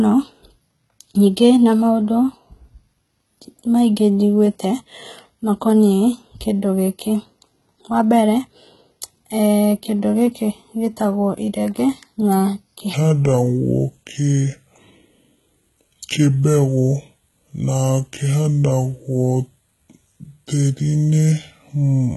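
From the start, the speech has gritty, lispy treble with nothing above 11.8 kHz, likely HE-AAC compression at a rate near 16 kbps, rebuilding the highs from copied lower bands. At 12.94 s, right after "gĩkĩ gĩtagwo irenge na", the rest drops to 0.674 times speed, about seven semitones deeper and dragging, likely a section at the wrong speed.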